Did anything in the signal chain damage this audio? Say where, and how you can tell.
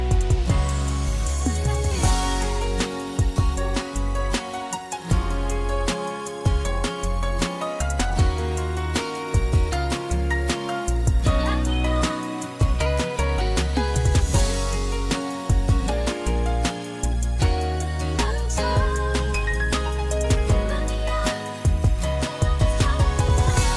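No, nothing in the signal chain audibly damaged this audio; level, continuity and timing hold steady throughout, with no audible dropouts, distortion, glitches or level jumps.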